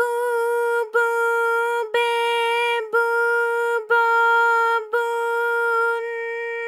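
No technical faults occur at any point, so there is nothing to describe in time order.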